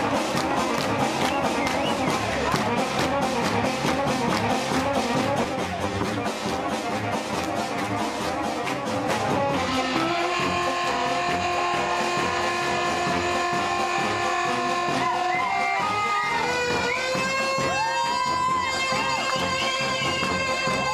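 From 5.44 s to 9.08 s there's channel delay with comb filtering. One side lags the other by something like 10 ms, and when the two get folded to mono, the shared content cancels at evenly spaced frequencies, starting down around 50 Hz and repeating roughly every 100 Hz. You hear it as the sound going suddenly hollow and phasey, with that fixed notched colouring, then snapping back after 9.08 s.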